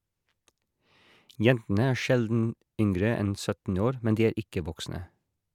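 No technical faults can be heard anywhere in the recording.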